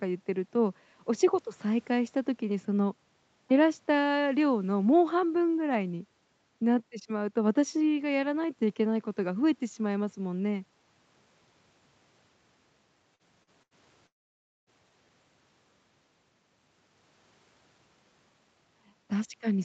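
At 13.15 s and again at 13.43 s there is short concealed packet loss: about 40 ms of the call went missing each time and was patched by extending the preceding sound. Each is heard as a brief smear or wobble; the gap is too short to fade into silence.

At 13.63 s a burst of packet loss removes about 80 ms. It is longer than the wobbles before it, so the continued sound lasts long enough to be heard as a held buzz or hiss that dies away before the audio resumes further along.

From 14.07 s to 14.70 s the sound stops for about 0.6 s. A short fading tail gives way to roughly 0.56 s of plain silence before the audio returns with a stretch missing. The cause is likely a long network dropout. What separates it from the earlier losses is that long silence.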